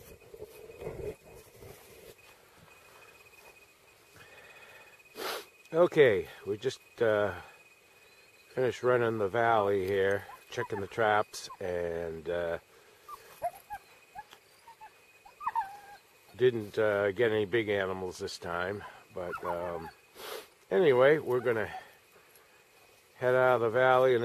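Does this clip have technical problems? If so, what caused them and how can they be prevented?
No, this clip has no technical problems, so there is nothing to prevent.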